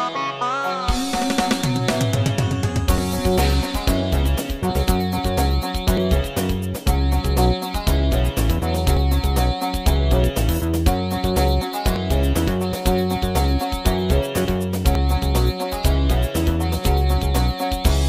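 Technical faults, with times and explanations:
2.98 s, 5.97 s, 8.97 s, 11.96 s and 14.95 s, audio missing between chunks: five brief skips, each about 7 ms long, spaced almost exactly 3 s apart, where the sound jumps forward with no gap of silence between the two sides of the join. The steady 3 s spacing points to a recorder or processor working in 3 s blocks that likely drops a few milliseconds each time it closes one block and opens the next.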